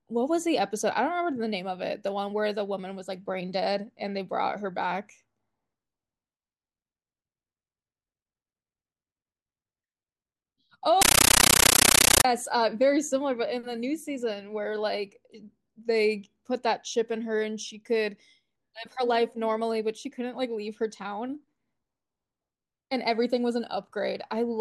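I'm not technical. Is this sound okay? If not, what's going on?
No. From 11.02 to 12.25 s the speech is replaced by very loud, harsh chattering static, like a rapid buzz. This is a compressed stream played as audio: a packed digital format, most likely Dolby Digital, was treated as ordinary sound instead of being unpacked first. Each chunk of data comes out as a short burst of noise, about 13 ms long, followed by silence, repeating 31 times a second, which produces that chattering rhythm.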